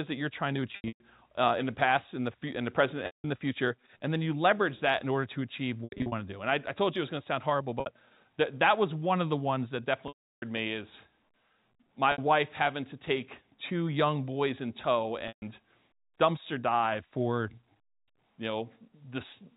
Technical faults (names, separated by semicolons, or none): packet loss with pitch repetition